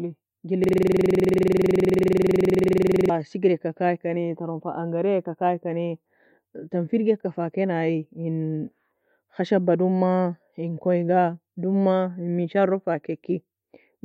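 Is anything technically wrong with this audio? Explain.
Yes. From 0.64 s to 3.09 s there is a system hang loop: the playback side froze while the audio hardware kept replaying the same ring buffer, so one 46.44 ms slice of speech repeats 53 times, which fits a 2048-sample buffer. It sounds like a harsh, rapid buzzing stutter at 21.5 Hz. The waveform shows the same short shape copied end to end, and a spectrogram shows a frozen pattern of vertical stripes evenly spaced 46 ms apart.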